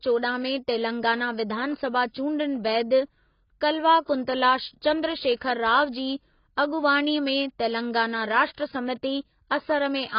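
From start to finish the speech has nothing above 5.2 kHz, and what remains is dull and smeared, with a warbling, fizzy texture on sustained sounds and sibilants. The likely cause is heavy AAC compression, consistent with AAC-LC at a very low bitrate of around 16 kbps. The encoder drops the top band and quantises the rest coarsely frame by frame. A simple low-pass filter would dull the sound just as much but leave it clean, without the bubbling texture.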